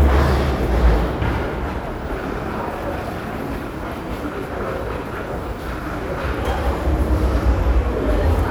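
No technical faults can be heard anywhere in these sounds. There is nothing to point to at any moment of the recording.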